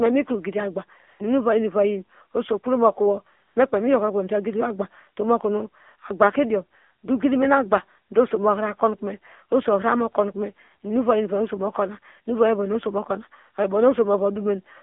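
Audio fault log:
throughout: AMR narrowband mobile codec. The speech sounds buzzy, synthetic and boxed into roughly 250 Hz to 3.5 kHz, typical of AMR-NB coding at a low bitrate near 7.4 kbps.
1.08 to 1.20 s and 3.48 to 3.56 s: AMR comfort noise. Smooth, steady hiss replaces the real background for 120 ms, then 80 ms after "oso kpro mokowo", because speech frames stopped and noise was synthesised.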